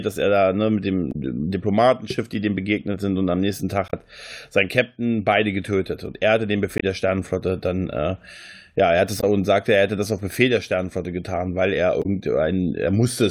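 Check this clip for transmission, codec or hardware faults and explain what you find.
There's damaged data in a compressed stream here, five short hits in the speech. Corrupted bytes make the decoder misread frames and resync on the next header, so you get brief glitches: 1.11–1.16 s after "er da ne mit", 3.85–3.93 s after "sind und am nächsten", 6.78–6.84 s, 9.19–9.24 s between "ja er hat es" and "und sagte er hätte", and 12.01–12.06 s.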